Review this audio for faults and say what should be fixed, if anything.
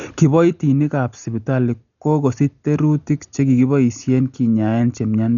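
The speech sounds dull and rough throughout, with nothing above 6.9 kHz and fluttering noise; heavy, likely Dolby Digital compression, fitting about 48 kbps, starving lines of bits. Prevent this by encoding at a higher bitrate.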